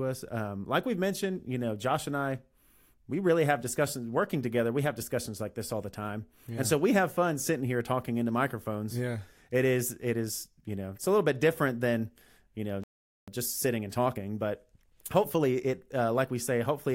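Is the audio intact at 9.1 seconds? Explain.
Yes, at 9.1 seconds the speech plays through cleanly, with no dropout, click, distortion or other fault at that point.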